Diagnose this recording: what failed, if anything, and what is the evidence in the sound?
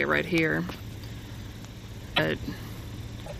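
Codec stage: at 2.16–2.20 s and 3.25–3.32 s the audio skips forward with a brief disturbance. A spectrogram would show a smeared or broken vertical band where frames are lost. This is likely a broken MP3 bit reservoir: frames after a cut borrowed data from bytes that are gone, consistent with frames of about 26 ms.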